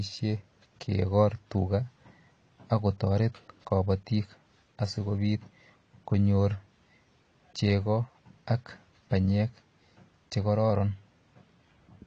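Low-bitrate AAC compression, likely AAC-LC at around 32 kbps, has squeezed this speech throughout, cutting everything above 9 kHz and leaving it dull, smeared and fizzy.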